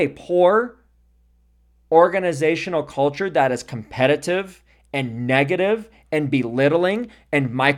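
Nothing goes wrong anywhere in this bit of speech, so there's no technical fault to point to.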